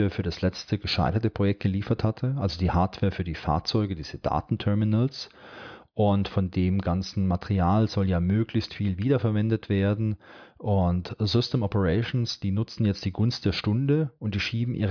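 No technical faults can be heard anywhere in the clip.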